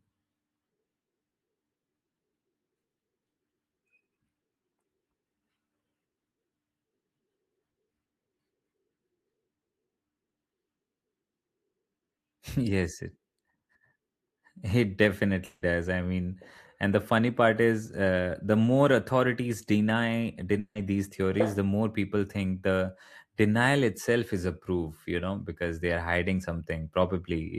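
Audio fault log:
15.45–15.63 s and 20.59–20.77 s, long network dropout: each time about 160 ms of the speech goes missing, and the gap is papered over with a fading smear of the last sound. The second one thins out to roughly 40 ms of silence before the speech returns on "these theories the more", while the first picks up right at "I mean and the". It's likely that the packets just never arrived and the receiver's concealment stretched what it had until it ran out.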